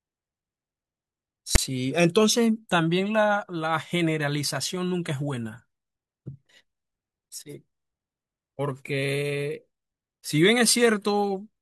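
Speech, interrupted from 1.55 to 1.58 s by file tags played as audio: text tags produce a harsh, one-sided rasp, then zero padding drops to silence. The spectrogram shows a sharp-edged broadband block; the waveform shows an offset slab, then a flat line.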